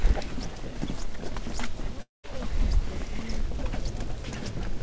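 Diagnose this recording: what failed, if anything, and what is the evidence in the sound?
At 2.02 s the sound smears into a fading buzz, then silence until 2.25 s, resuming with 220 ms gone: likely a long network dropout.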